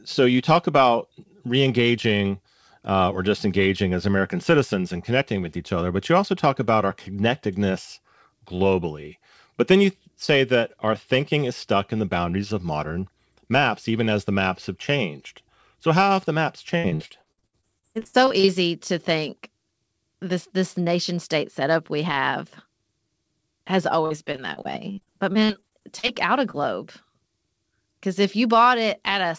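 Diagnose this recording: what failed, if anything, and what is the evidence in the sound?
Repeated packet loss (robotic sound), from the network. From 16.78 to 18.50 s, between "how have the maps" and "to think", the audio goes choppy. Well over a dozen holes come in quick succession, the longest about 64 ms, and roughly a third of that stretch is concealment rather than real signal. It happens again from 24.06 to 26.11 s, ending just before "out a", with shorter holes (longest about 45 ms) and about a fifth of it concealed. The receiver keeps extending the last sound to cover each gap, which gives that choppy texture with pieces missing. The underlying band stops at 8 kHz, which fits a 64 kbps G.722 call leg.

Short concealed packet loss, also network. Just after "out a", at 26.51 to 26.55 s, there's a brief smear where about 20 ms of audio never arrived in time. The decoder bridged it by continuing the preceding sound and then blending back into the real signal. 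It's a single quick wobble rather than the sustained choppiness of the earlier stretches, and it comes right on the heels of the second burst.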